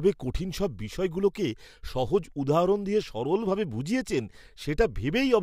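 No technical faults can be heard in this recording.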